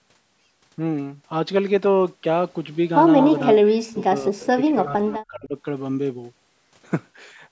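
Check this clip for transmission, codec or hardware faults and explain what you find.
Two call-path faults stand out in the middle of the speech, an echo leak followed by speech suppressed in double talk; the band stops at 8 kHz, as expected for call microphone processing.

From 3.2 to 3.56 s a delayed copy of the voice trails the talker by about 217 ms, sitting roughly 10 dB below the direct speech. This is an echo leak. The likely cause is a far end playing the call over a loudspeaker whose echo canceller failed to remove everything its microphone captured, so the remainder was returned down the line.

Immediately after, from 3.58 to 4.03 s and again from 4.22 to 5.56 s, the talker's voice sinks, dropping by around 40 dB in the first stretch and around 30 dB in the second. This is speech suppressed in double talk. Both sides were likely speaking together, and the echo canceller, unable to tell the local talker from loudspeaker echo, attenuated everything it heard.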